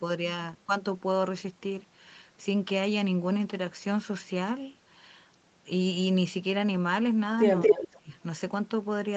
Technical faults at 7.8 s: echo leak; speech suppressed in double talk

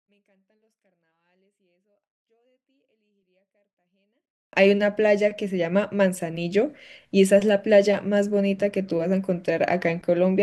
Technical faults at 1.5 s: 24-bit alignment error (too quiet)

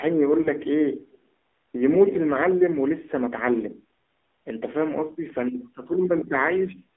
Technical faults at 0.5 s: AMR narrowband mobile codec; lost AMR speech frames

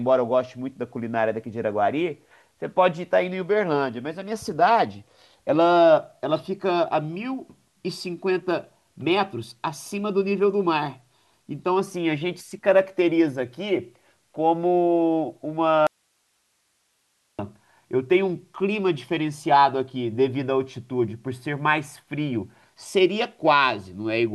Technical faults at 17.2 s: audio dropout to a faint residue

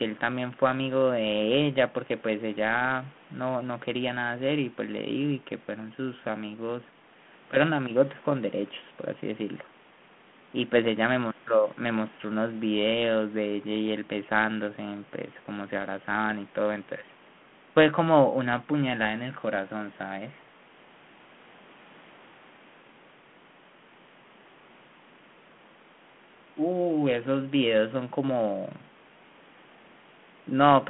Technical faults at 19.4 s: none

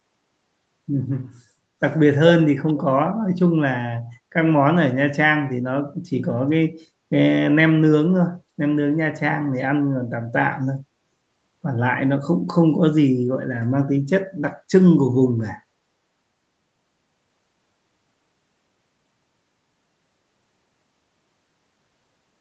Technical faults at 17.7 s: none

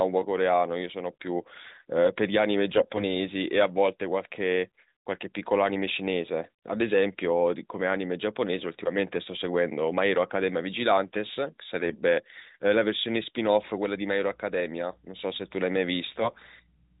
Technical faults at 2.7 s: AMR bit errors

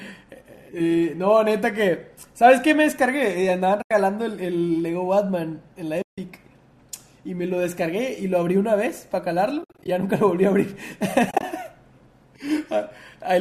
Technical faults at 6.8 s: none

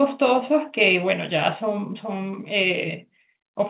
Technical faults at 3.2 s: none

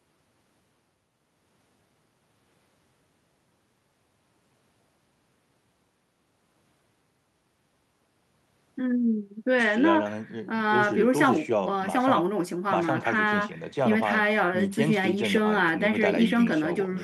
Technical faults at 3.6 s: none

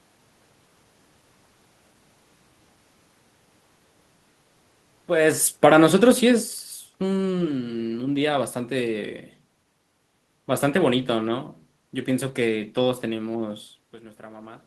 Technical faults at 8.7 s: none

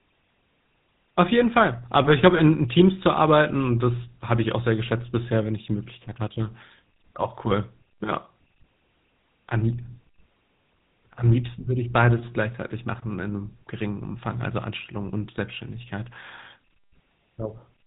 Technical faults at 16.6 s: GSM full-rate codec

